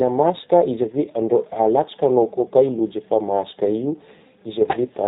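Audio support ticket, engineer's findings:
G.729 codec damage throughout: band-limited to 4 kHz, rough synthetic speech from pulse-excited filter resynthesis in 10 ms frames, consistent with an 8 kbit/s G.729A stage.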